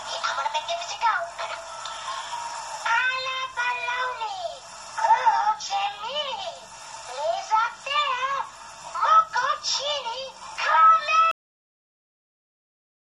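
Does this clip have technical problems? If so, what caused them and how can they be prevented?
Yes. A cut-off end occurs at 11.31 s: the sound stops abruptly mid-event and falls straight to digital silence, with no natural decay, for the remaining 1.8 s or so. This happens when the final buffers of audio are never written to the file or never reach playback, typically because recording or export is stopped before the pipeline has flushed. To prevent it, stop capture only after all pending buffers have been drained and the file properly closed.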